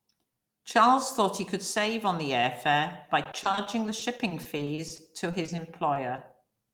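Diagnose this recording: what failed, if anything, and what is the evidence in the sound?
Network stage: repeated packet loss (robotic sound) from 3.23 to 6.52 s. The speech turns choppy. Holes up to 30 ms are patched by extending the previous sound.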